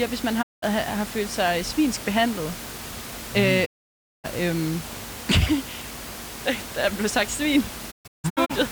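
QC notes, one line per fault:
0.41–0.64 s, digital broadcast dropout: the receiver stopped getting usable frames and muted, so the speech fades out over 20 ms and stays silent for about 190 ms, which points to six lost frames of 32 ms each.
3.64–4.26 s, digital broadcast dropout: a longer mute, about 580 ms of speech lost behind the same 20 ms fade.
7.90–8.52 s, digital broadcast dropout: several short holes scattered across the span, the longest 160 ms and about 380 ms lost in all.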